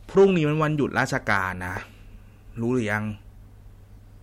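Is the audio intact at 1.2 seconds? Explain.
No. Around 1.2 seconds you're right in the middle of a stretch of hard clipping that runs from about 0.98 to 1.37 s. The speech there was driven roughly 5 dB past what the stage could handle, so the peaks got sliced flat instead of rounding over. Those squared-off tops throw extra harmonics way up the spectrum, and you hear it as a harsh, crackly fuzz riding on the louder parts of that bit.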